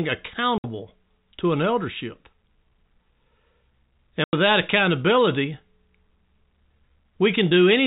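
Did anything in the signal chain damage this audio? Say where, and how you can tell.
Yes, in the network stage: packet loss filled with silence. Packets went missing and the receiver inserted plain silence instead of concealing the gap, so the speech is cut by two dead holes, at 0.58 to 0.64 s (60 ms) and at 4.24 to 4.33 s (90 ms). Both lengths are multiples of 10 ms, which fits 10 ms packets. The signal drops abruptly to silence and returns just as sharply. The telephone-band G.711 coding carries through the gaps unchanged.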